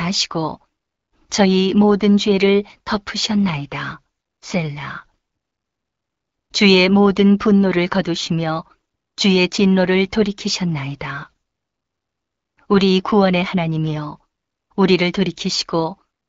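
Speech carried over an AMR wideband (HD Voice) link at 12.65 kbit/s, the rate where that codec stays clear, with only light coding texture and no technical faults to report.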